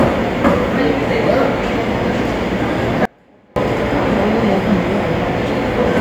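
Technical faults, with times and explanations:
3.05–3.56 s, audio dropout to a faint residue: the sound cuts out abruptly for about half a second, leaving only a faint trace roughly 30 dB down, then snaps back. The likely cause is a brief loss of the wanted signal while the downstream path stayed live.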